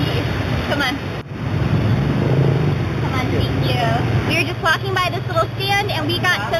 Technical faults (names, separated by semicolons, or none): imaging from linear upsampling